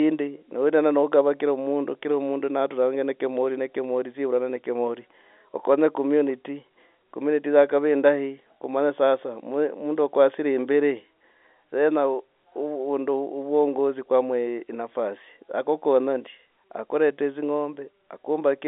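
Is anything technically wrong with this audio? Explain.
No, nothing in this speech recording is technically wrong. It carries the sound of G.711 telephone coding working as intended, with the line band running from about 250 Hz to 3.6 kHz and nothing above roughly 3.8 kHz, which fits an ordinary 64 kbps A-law phone connection.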